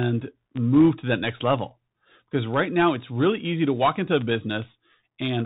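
From the start, the speech passes through a Bluetooth CVSD headset codec, and the damage is plainly audible. CVSD codes each sample as a single up-or-down bit and adapts its step size, in a way that fits a 64 kbps link. Everything above 4 kHz is gone, leaving a narrow telephone-like band. Loud, bright passages outrun the step size and distort, s sounds come through scratchy, and a granular hiss sits under the speech for the whole clip.

At 0.81 s, just before "to that next level", there is a burst of bit errors on a Bluetooth voice link, at an error rate of around one percent. Each flipped CVSD bit nudges the waveform only slightly, and its effect decays quickly, so no sharp click is heard. Instead, a brief rushing, crackly noise lies over the sound, thickening the codec's hiss at that point.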